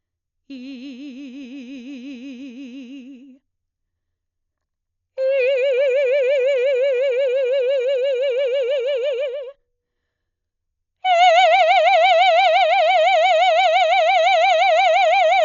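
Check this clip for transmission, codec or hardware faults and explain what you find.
There's one codec fault across the whole music clip. It's heavy, band-limited coding that likely comes from Dolby Digital compression. Nothing reaches above 7 kHz, so it sounds dull, and a rough, fluttering noise hangs around tones where starved lines get filled with dither, which fits a bitrate near 40 kbps.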